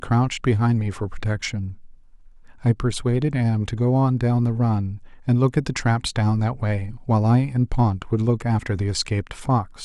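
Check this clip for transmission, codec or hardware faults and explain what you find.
One fault runs through the speech: clock slip clicks from about 0.15 s to 9.8 s. Two devices in the chain are likely running on unsynchronised clocks, differing by roughly 150 ppm, so a single sample is dropped or repeated each time the drift reaches a whole sample. That happens roughly every 0.15 s, around seventy times in all, giving a faint, regular ticking, almost a light rattle, most audible on louder, sustained parts of the speech and gone in pauses.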